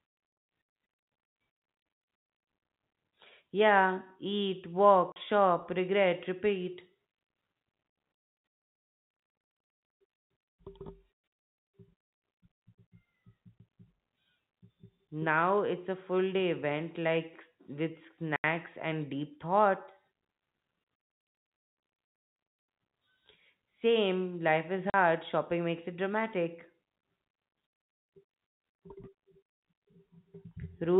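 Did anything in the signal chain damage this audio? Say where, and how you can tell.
Yes, at the network stage: packet loss filled with silence. Hard-edged gaps cut the speech at 5.12–5.16 s (before "shop regret repeat"), at 13.58 s, at 18.36–18.44 s (before "and deep thoughts"), at 24.9–24.94 s (between "life is" and "shopping makes it"), and at 29.52–29.62 s. Lasting 20 to 100 ms, all multiples of 20 ms, which fits 20 ms packets that never arrived and were replaced by silence. On a waveform they are flat silent slots, and on a spectrogram they are blank vertical bands. Above 4 kHz the spectrogram is also empty, as expected from the G.711 telephone coding.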